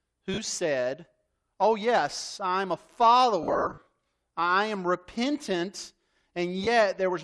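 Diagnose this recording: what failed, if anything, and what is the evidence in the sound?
Lost LE Audio frames on the Bluetooth link at 0.34, 3.43–3.87 (just before "I am repentant") and 6.64 s: LC3 concealment replays the last spectrum with random phases, smearing speech into a brief noisy hiss.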